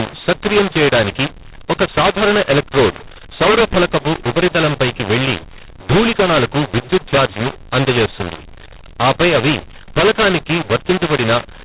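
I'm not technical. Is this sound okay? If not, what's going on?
No. From start to finish the speech sounds harsh and crunchy, with loud parts and soft parts jumbled, and the gaps between phrases filled with a hiss instead of silence. This is a case of mu-law and A-law mixed up. The phone line itself works, but the sound was packed using the mu-law system and unpacked using A-law, so every volume level comes out wrong and even the quietest moments are pushed up into audible noise.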